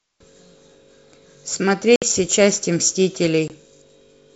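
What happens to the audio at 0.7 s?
Nothing goes wrong at 0.7 s: the speech there comes through intact, carried by G.722 wideband telephone coding at 64 kbit/s with no more than a faint trace of the codec.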